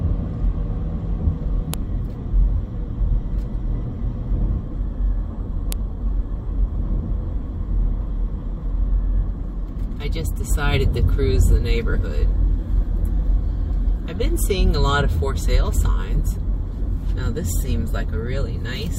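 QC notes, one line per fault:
1.74 s and 5.72 s: file header played as audio. Each spot has a short click or snap where separate WAV pieces seem to have been joined with their headers left in, so those header bytes get played back as samples, regardless of the surrounding audio.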